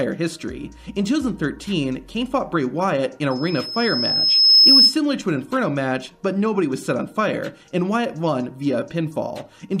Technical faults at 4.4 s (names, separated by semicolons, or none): loudspeaker feedback squeal